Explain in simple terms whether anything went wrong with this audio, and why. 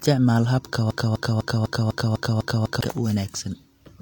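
Something did go wrong. From 0.91 s to 2.81 s the speech gets stuck in a broken-record loop: a quarter-second piece (250 ms) plays 8 times in a row, each copy identical and butted right against the next. The likely cause is a stall in the player, encoder or stream, which kept resending the last piece it held. Unlike an echo, the repeats don't fade or overlap, and whatever should have been said during those two seconds is simply gone.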